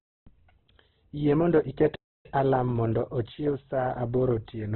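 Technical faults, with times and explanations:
Throughout: Opus compression, heavy. Nothing survives above about 4.1 kHz, so the speech is boxed into narrowband, and what's left sounds rough and grainy instead of swirly, which fits Opus likely starved at around 12 kbps and filling bands with noise.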